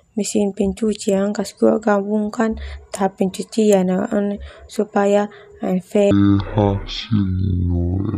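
From 6.11 s to the end at 8.17 s, a section at the wrong speed: the speech plays at half speed, dropping roughly ten semitones into a deep, dragging drawl, likely from playback on a mismatched clock. Unlike a pure pitch shift, timing slows together with pitch.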